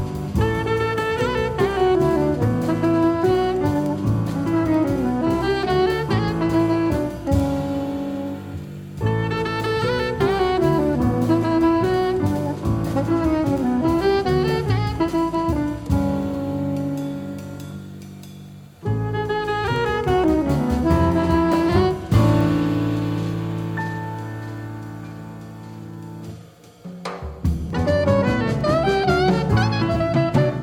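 Steady ticks once a second, 0.32 to 30.35 s: word clock ticks, as an unlocked clock, roughly 20 ppm off, drops or repeats a sample.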